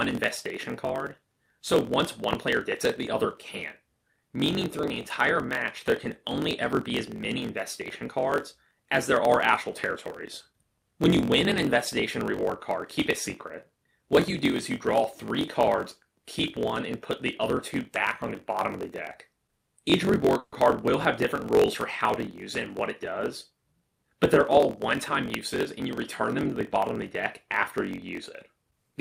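A block size mismatch (truncated) runs through the whole clip. One stage writes longer blocks than the next reads, and the tail of every block is dropped. The result is a steady buzz at about 45.9 Hz, the rate at which those cuts fall, and the audio plays 1.07 times fast while keeping close to its normal pitch. That pairing of buzz rate and speed-up fits a stage writing 1024-sample blocks into a reader that takes slightly fewer.

A loud pop lands at 2.33 s, and another at 25.34 s. Each is a single sharp click standing about 20 dB above the surrounding signal, and the sound continues underneath it. Such short, isolated spikes are likely caused by a voltage step or pulse entering the chain, as from a switch, static discharge or a driver glitch, which the following circuitry then shapes into the pop.

A call audio freeze occurs from 20.39 to 20.54 s. For about 130 ms the last sound is stretched into a fading continuation instead of falling to silence, and then playback resumes exactly where it stopped, so nothing is lost. 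Instead, the delay grows by that same 130 ms. This is likely caused by packets held up in transit, leaving the jitter buffer empty until they arrived.

A jitter buffer speed-up follows from 23.12 to 24.60 s. The audio hurries along at about 108% of normal speed while holding its pitch. This happens because the receiver trims many short pitch-period slices in a row, removing roughly 150 ms in total. It is working off the surplus that built up in the buffer.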